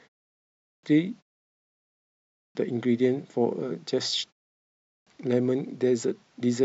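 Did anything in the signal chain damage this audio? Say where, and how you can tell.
Yes. The damage happens at playback, in the output device. There is a clipped start after a pause at 0.44, 1.56, 2.15 and 4.66 s. Each time, after a silence of 0.3 to 0.44 s, the sound bursts in already under way, with about 0.4 s of its opening gone. The device sleeps through the gap and needs that long to wake, so onsets are swallowed. Pause muting would remove only background in the gaps, never the start of the sound.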